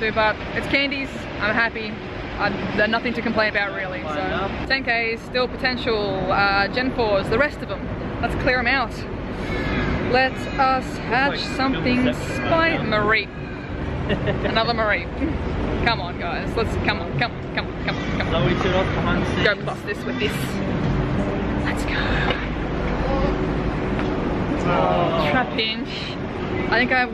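Nothing is technically wrong with this audio.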